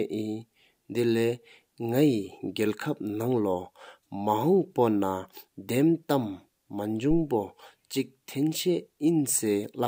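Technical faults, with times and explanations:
7.11 to 7.23 s, phantom power thump: a single deep, low-pitched thud breaks into the speech, peaking at about -21 dBFS and dying away within roughly 27 ms, so it lands as a short dull knock rather than a lingering boom. It comes from a supply being switched on or off on the live microphone input. The sudden DC step passes through the coupling capacitors and is heard as that brief low-frequency pulse before the circuit settles.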